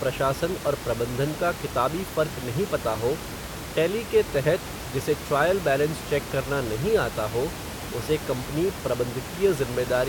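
No technical faults are audible anywhere in this recording.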